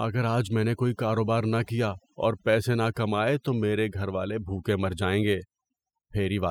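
From start to finish, the speech carries overdone noise removal. A noise reducer was set far too aggressively. Wherever a frequency band sat near its noise estimate, it pulled that band down hard or shut it off. Soft parts of the speech fell below that line and were removed too. The background between phrases drops and breaks up into chirping specks.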